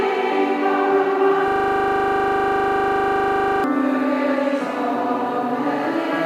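From 1.48 to 3.64 s a system hang loop repeats one 40 ms slice at 25 Hz, a rattling buzz replacing about two seconds of audio.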